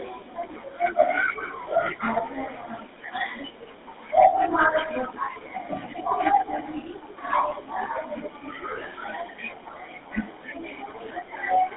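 GSM full-rate codec damage runs throughout the speech. The codec models the vocal tract and excites it with sparse, regularly spaced pulses, leaving a plainly audible buzzy, gravelly roughness, consistent with roughly 13 kbps, and a narrow line band of about 200 Hz to 3.6 kHz.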